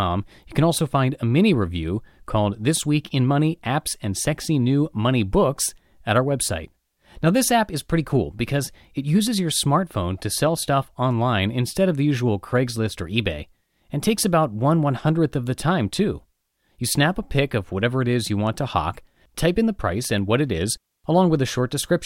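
No technical faults can be heard anywhere in the recording, and the signal holds steady throughout.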